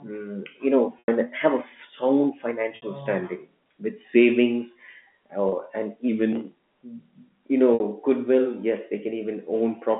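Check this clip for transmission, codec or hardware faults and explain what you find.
The speech has four short dropouts from packet loss with pitch repetition, at 0.99 s (90 ms lost), 2.76 s (60 ms), 5.49 s (30 ms) and 7.74 s (60 ms), consistent with whole 30 ms packets going missing. Each time, the receiver filled the hole by replaying the last pitch period and fading it, so the voice briefly locks onto a held, slightly buzzy tone, and in the longer gaps fades into silence, before resuming. The 90 ms gap at 0.99 s is the longest. All of this sits within the narrow 200 Hz to 3.5 kHz telephone band of G.711 coding.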